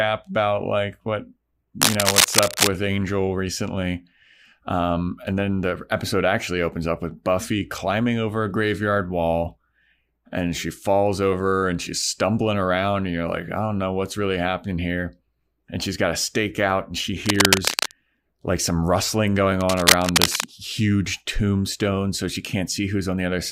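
A worn cable or connector likely shifted, its contact resistance jumping and adding cable scratch noise: rough crackling bursts after "about like what" at 1.81–2.68 s, louder than the speech; then after "stake out and she" at 17.24–17.93 s and after "like some rustling going" at 19.60–20.45 s, each about as loud as the speech.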